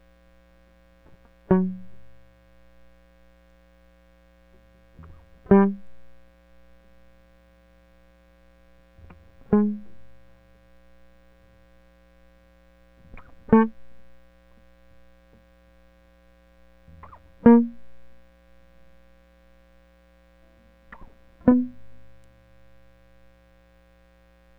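There are no technical faults to describe in time order anywhere in this music.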